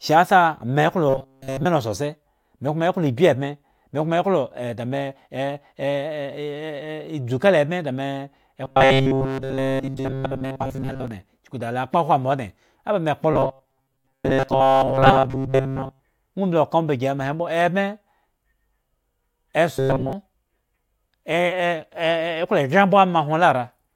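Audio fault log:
1.09–1.65 s, 8.64–11.08 s, 13.33–16.03 s, 19.75–20.13 s: robotic sound from repeated short buffers. The voice becomes a rigid metallic buzz near 134 Hz. It still loosely tracks the speech, though the first stretch is almost entirely buzz and the later ones are mostly buzz. The likely cause is late-arriving audio being covered by looping a buffer of about 7.5 ms, which sets that fixed pitch.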